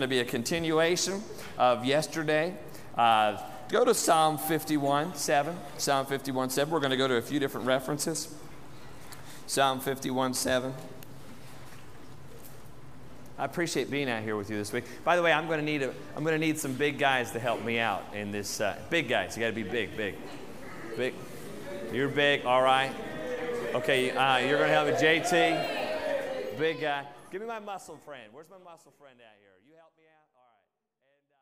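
No technical faults can be heard, and the level eases down in a smooth fade-out beginning around 26 s and closing at 31.4 s without any click or hard edge.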